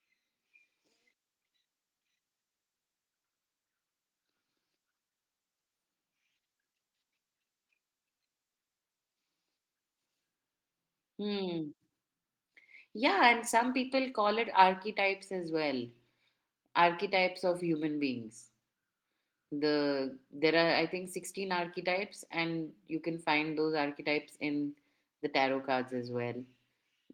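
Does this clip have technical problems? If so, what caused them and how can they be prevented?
No, there are no technical problems in this speech clip. The Opus voice compression keeps the full audio band and leaves only light coding marks on the speech.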